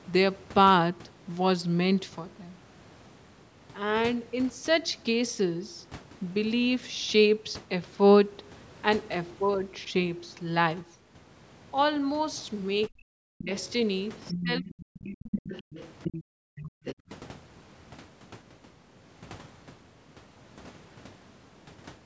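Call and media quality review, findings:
Speech suppressed in double talk, 12.89–13.51 s and 14.32–15.43 s. Talker's level sags, with the deepest dips reaching around 40 dB down. Likely an echo canceller losing track during simultaneous talk: it cannot separate near-end speech from loudspeaker echo and attenuates both. Second episode runs about a second and overlaps the leaked far-end audio.

Other side's voice leaking through, 14.3–14.83 s, 15.19–16.23 s, 16.57–16.95 s. A second, weaker voice is audible under and between the talker's speech. It sits roughly 10 dB below the talker in the first two stretches and lower still in the last. Likely residual echo: the device's loudspeaker output reaches the microphone and the canceller fails to remove it fully.

Background gated by the echo canceller, 16.23–17.09 s. The room sound drops away, by about 38 dB at its deepest, then returns once the gate releases, so the background briefly goes dead. 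The echo canceller's suppressor clamps the microphone hard while the loudspeaker is active. It releases late, after the far-end scrap at 16.57–16.95 s has ended. The call chain's normal bass high-pass is also present.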